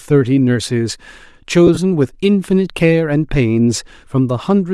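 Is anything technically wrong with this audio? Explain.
Yes, there are two faults. Throughout, the speech has a breathy, grainy edge, likely from Bluetooth LC3 compression at a rate that fits about 48 kbps. A spectrogram would show a thinned, noise-filled upper band.

From 1.67 to 1.78 s, lost LE Audio frames leave brief noisy smears. The decoder reuses the last spectrum with random signs, visible as blurred vertical patches in short bursts.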